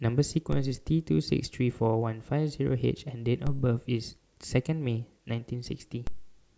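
A low thump, each time over in a fraction of a second, lands at 0.53 s, 3.47 s and 6.07 s while the speech carries on untouched. These are DC steps: the waveform's zero line jumps abruptly by about -22 dBFS (about -23 dBFS for the last), and the offset then bleeds away through a high-pass around 2 Hz, relaxing over roughly 80 ms. The sudden jump produces the thump.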